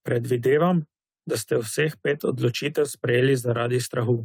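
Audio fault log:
Nothing stood out on listening to this speech recording.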